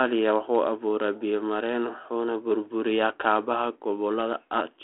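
No technical faults are audible.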